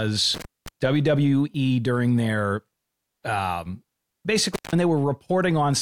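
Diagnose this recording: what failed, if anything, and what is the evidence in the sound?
Intermittent contact in the analogue wiring, at 0.34 to 0.68 s and again at 4.54 to 4.73 s. A loose cable or plug opens briefly, about 210 ms and 170 ms, so the speech drops out with crackle at each edge as the connection breaks and remakes.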